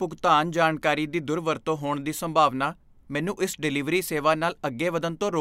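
Nothing in this speech recording stood out as a technical fault on listening.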